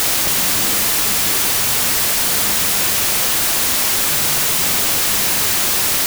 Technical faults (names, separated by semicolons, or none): wrong sample width